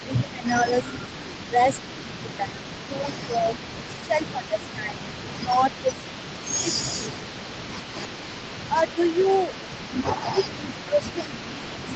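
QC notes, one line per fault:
Throughout: echo leak. A faint delayed copy trails the speech by about 430 ms, roughly 20 dB down, likely a loudspeaker echo the far end's canceller failed to remove.
0.02–3.55, 4.06–5.94, 6.61–7.96, 8.67–9.52 and 10.34–11.95 s: speech suppressed in double talk. The voice dips by around 10 dB, deepest near 15 dB in the last stretch, likely because the echo canceller turned down its own talker along with the loudspeaker echo while they overlapped.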